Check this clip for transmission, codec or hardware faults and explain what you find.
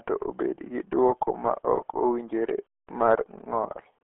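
One fault runs through the whole clip: RealAudio 14.4 codec damage. The speech sounds muffled and gargly from start to finish, squeezed into a narrow telephone-like band of roughly 300 Hz to 3.4 kHz, with nothing at all above 3.8 kHz. The damage is heavy. Vowels take on a watery, bubbling texture and consonants lose their crispness. The sound fits an 8 kbit/s RealAudio 1 encoding, a dial-up-era speech codec that models the voice coarsely and throws away everything outside that narrow band.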